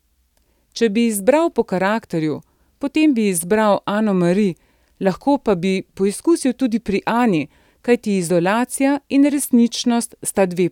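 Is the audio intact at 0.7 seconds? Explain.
Yes, the speech is intact at 0.7 seconds, with no dropout, click, distortion or other fault at that moment.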